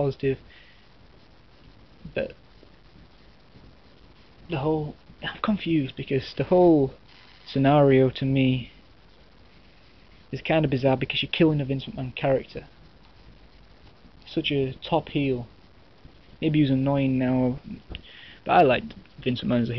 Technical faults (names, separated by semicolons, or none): none